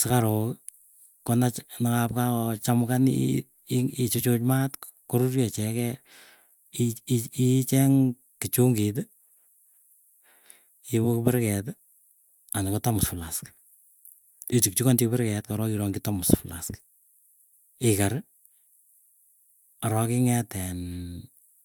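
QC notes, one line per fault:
Nothing stood out on listening to the speech.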